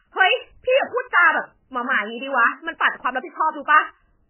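From start to finish the speech carries heavy MP3 compression damage. Nothing survives above about 3.1 kHz, so the top is sheared off and sibilants lose their edge. The bit budget is very thin, and the damage fits a rate near 9 kbps. Weak frequency lines drop in and out between frames. That leaves a watery, swirling texture with metallic chirps on s sounds. Consonant onsets smear. Starving the encoder of bits this way is the likely cause.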